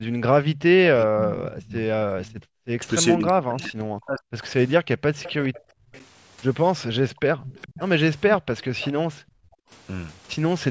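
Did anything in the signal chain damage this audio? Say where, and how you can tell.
Yes. The damage happens in the call processing stage, in the echo canceller.

Speech suppressed in double talk: between 0.0 and 5.94 s the speech repeatedly sinks or breaks up, adding up to roughly three seconds and dipping by as much as 40 dB. There is a brief 8.34–8.40 s gap as well. This is likely the canceller muting the near talker while the far side was also active. What separates it from simple gating is that the speech itself gets chopped, not just the quiet room tone between phrases.

Background gated by the echo canceller: the room tone drops out, by about 38 to 40 dB, at 0.01–0.12 s, 2.34–2.78 s and 9.12–9.70 s, then recovers. Here the canceller clamped the microphone while the loudspeaker played. These holes land in the background rather than cutting into speech, which is how they differ from the double-talk damage.

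Echo leak: from 1.27 to 8.93 s a faint copy of the speech trails the original by 418 ms, roughly 15 dB down. The likely cause is residual loudspeaker pickup that the canceller failed to remove. The fixed, long lag and the lower level mark it as returned echo rather than room reverberation, which would smear continuously instead of repeating as a discrete delayed copy.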